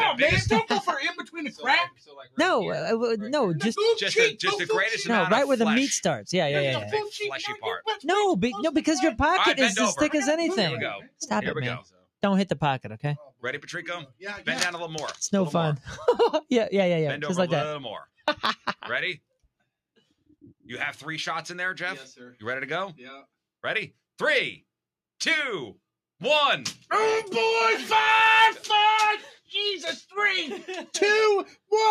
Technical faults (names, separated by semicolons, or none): sound cut by the noise suppressor